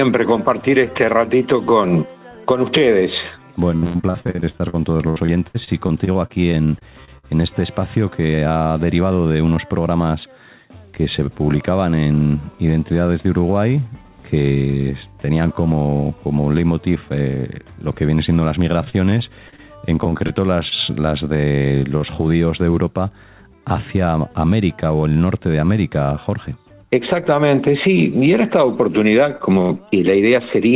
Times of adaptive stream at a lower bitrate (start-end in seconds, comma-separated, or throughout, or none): none